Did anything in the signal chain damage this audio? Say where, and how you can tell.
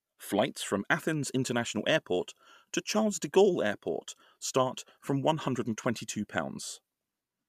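No, nothing in this speech recording points to damage from any stage of the signal chain, so there's nothing here to trace back.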